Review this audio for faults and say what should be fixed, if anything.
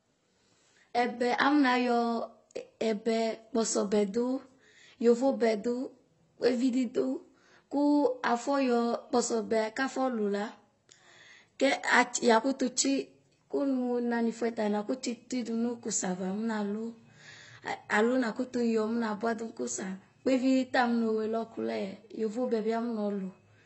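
AAC compression affects the speech from start to finish: nothing is left above about 8.1 kHz, and the damage is plainly audible as a dull, smeared sound with a warbling, fizzy texture on sibilants and held vowels. This is likely AAC-LC at a low bitrate, around 24 kbps, where the encoder lowers its cut-off and leaves holes in the spectrum that shift from frame to frame. A simple low-pass filter would dull the top end just as much but leave no warbling. Encoding speech at a higher bitrate, or keeping a lossless master, would prevent it.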